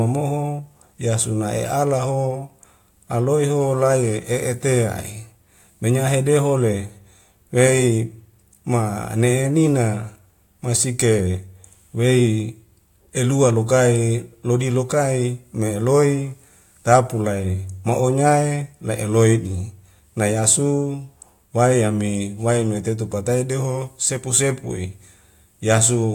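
Nothing in this speech recording stands out as a technical fault, so there's nothing to flag here.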